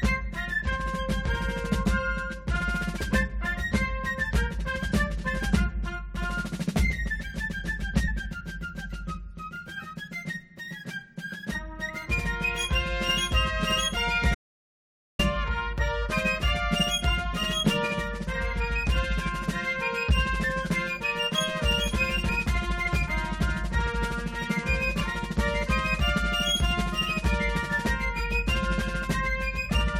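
At 8.07 s a brief glitch marks damaged data in a compressed stream: corrupted bytes make the decoder lose frame sync, unlike a clean gap. From 14.35 to 15.19 s, an audio dropout to silence removes about 0.84 s, probably from a lost input. It is silent with no room tone, which sets it apart from a quiet passage. The same corruption blips return from 22.28 to 22.30 s and at 25.00 s.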